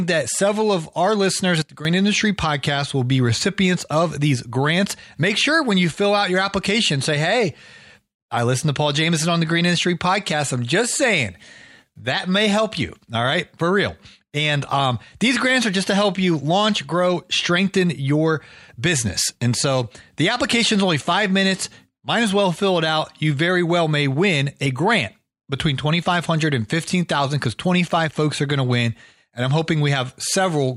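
At 1.62 s the speech drops abruptly by about 12 dB. It stays down until 1.85 s, then returns to its earlier level just as suddenly. This is a sudden gain jump. The change happens between one sample and the next, with no fade in or out. The background noise falls and recovers with the speech, so the whole signal steps down together. The likely cause is a digital gain setting applied without a ramp.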